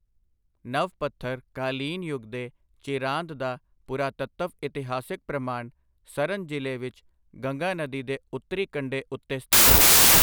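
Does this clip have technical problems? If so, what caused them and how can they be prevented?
Yes: after "ਨਦੀ ਦੇ ਉੱਤਰੀ ਕੰਢੇ", from 9.53 to 10.22 s, a wrong sample width turns the sound into loud broadband noise, slowed to 0.667× speed with lowered pitch. Packed 24-bit data read as 16-bit splits samples across mismatched bytes, so the waveform is dominated by loud noise and the spectrogram shows dense noise with faint, compressed traces of the original. Prevention: carry the sample format in the file header or stream metadata and verify it before decoding.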